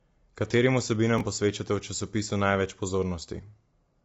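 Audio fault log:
throughout: low-delay AAC compression. The sound is rough and grainy throughout, with a hiss-like fill between the pitch harmonics. Nothing reaches above 7.8 kHz. The likely cause is AAC-ELD, the low-delay AAC codec used in video calls. Its very short frames cannot separate closely spaced harmonics well, so noise creeps between them. The damage is plainly audible, which fits a low bitrate of around 24 kbps.
1.18–1.21 s: chunks out of order. A brief jumbled blip is heard here. One block of about 10.67 ms plays one place late, after the block that should follow it. No audio is missing. The order is simply swapped. Each misplaced edge makes a hard join, and together they give three hard joins within about 21 ms.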